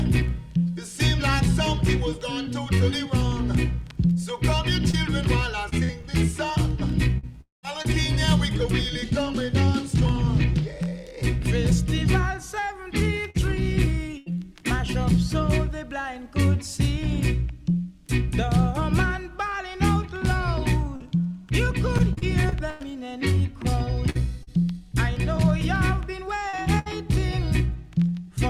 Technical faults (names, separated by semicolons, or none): scattered short gaps; long network dropout; short concealed packet loss; burst of packet loss; repeated packet loss (robotic sound)